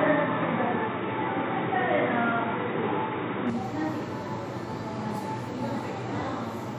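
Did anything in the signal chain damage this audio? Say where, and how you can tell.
Yes: input switched to a poorer device, 0.0 to 3.50 s. The sound is band-limited to 3.8 kHz, with shifted level and noise, likely a narrower input device.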